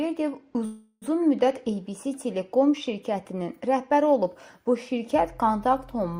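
At 0.65 to 1.04 s there's a call audio freeze: the last sound stretches into a fading buzz, then resumes where it stopped, likely from late packets draining the jitter buffer.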